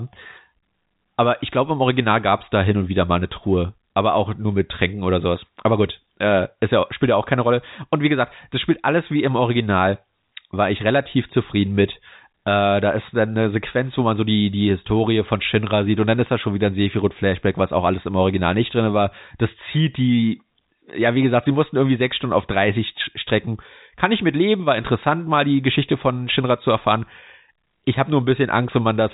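Nothing's wrong with this speech recording; it's simply carried over G.711 telephone coding, so the sound stops below 4 kHz, just as a phone line does.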